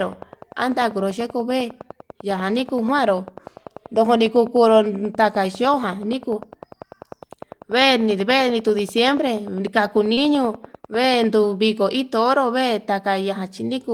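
From 0.03 to 11.35 s a train of clicks ticks regularly at about 10 per second, some hundred pulses near speech level, likely from nearby equipment interference. At 10.13 to 10.19 s, short concealed packet loss drops 40 ms; about 35 ms is filled by extending the preceding sound, leaving a brief smear.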